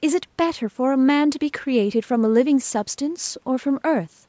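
No technical faults are audible.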